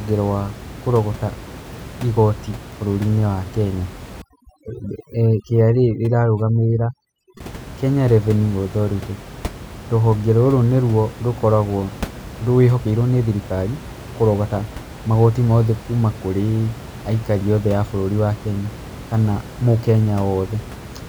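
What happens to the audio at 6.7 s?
At 6.7 s the clip is inside a stretch of overdone noise removal running from 4.22 to 7.40 s. The noise reducer is set far too aggressively for a room whose background sits only about 16 dB under the speech. Any frequency band close to its noise estimate gets pulled down hard or cut out, taking the quieter parts of the voice along with it. The background drops and breaks up into twinkling specks.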